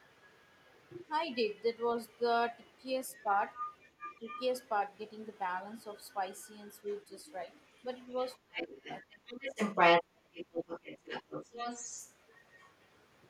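From 3.54 to 4.43 s a second voice can be heard under the speech, fairly clearly but well below it. This is the other side's voice leaking through, likely because a loudspeaker fed the microphone and the echo canceller left a residue. It returns faintly from 6.88 to 7.61 s. From 8.2 to 12.7 s it is almost as loud as the main talker. What separates it from crosstalk or a background talker is that it tracks the far end of the call.

Within that last leak, from 8.43 to 9.21 s, the talker's own voice is pulled down, by up to about 30 dB at its deepest and for around half a second in total. This is speech suppressed in double talk. With both sides talking, the echo canceller likely mistook the talker for echo and attenuated everything. Unlike a network dropout, the drops line up with the other side speaking.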